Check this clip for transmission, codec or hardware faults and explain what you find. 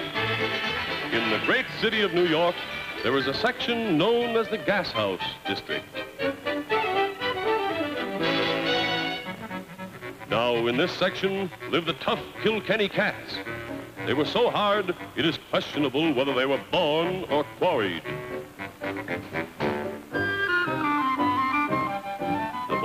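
Nothing here points to a transmission, codec or hardware problem; the audio holds together all the way without any trouble to report.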